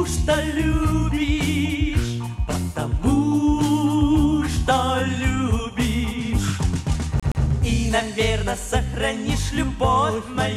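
At 7.20 s a fast, even stutter breaks in: a fragment of about 120 ms plays twice with a brief mute at each jump, ending by 7.44 s. This is a CD stuck on one turn, where a scratch throws the laser back one track at the same point on the disc.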